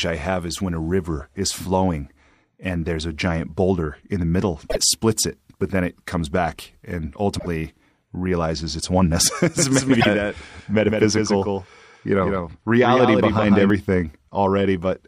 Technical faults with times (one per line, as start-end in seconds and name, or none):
4.69-4.76 broken MP3 bit reservoir
7.38-7.46 broken MP3 bit reservoir
8.79-8.82 broken MP3 bit reservoir
9.59-13.70 doubled audio track
9.99-10.06 broken MP3 bit reservoir